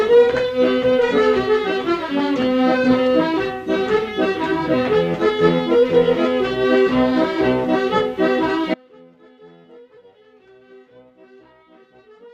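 The feed carrying the wanted signal was likely lost at 8.74 s while the path after the break stayed live: an audio dropout to a faint residue. The sound cuts off abruptly and runs to the end as only a faint leak, roughly 30 dB below normal.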